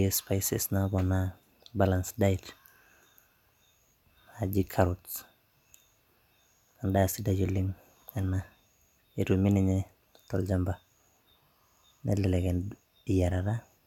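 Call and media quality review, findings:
Nothing stood out on listening to the speech, and there are no findings to raise for this ticket.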